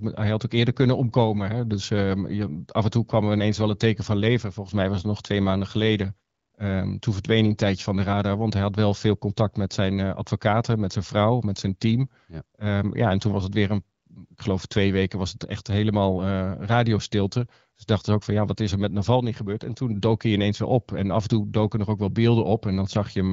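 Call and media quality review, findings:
No faults found in this speech recording.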